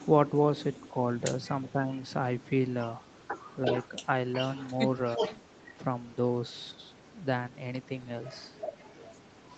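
Right at the start, 0 to 0.1 s, a faint trace of echo leak slips in. Then from 2.42 to 5.71 s there's a strong copy trailing the speech by 365 ms, almost as loud as the speech itself, likely a far-end loudspeaker echo the canceller didn't catch.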